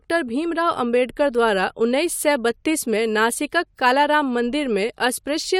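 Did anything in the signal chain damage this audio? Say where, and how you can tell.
No, nothing in the chain has left an audible mark on this speech recording at any stage.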